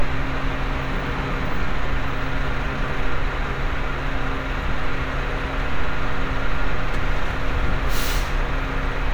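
A recording of everyday sound with audio missing between chunks at 7.31 s: around 50 ms drops out and the two sides butt together with no gap, heard as a brief skip. This is likely a 4-second chunked recorder losing material at a chunk changeover.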